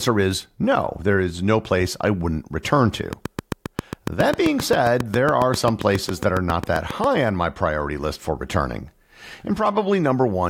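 Likely interference from nearby equipment or a faulty connection or power supply injects a steady pulse into the signal, producing a train of clicks from 3.13 s, just after "place I wouldn't return", to 7.05 s, just before "on my priority list". About thirty near-identical clicks arrive at an even 7.4 per second, standing roughly 15 dB above the speech, so a sharp, regular ticking rides over the talking and carries on through the pauses.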